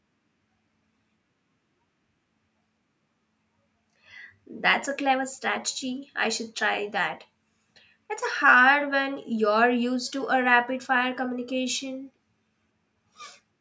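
Nothing goes wrong anywhere in this speech; it just carries the usual call microphone processing, with the lowest bass trimmed away and nothing above 8 kHz, which is exactly what that path is expected to do.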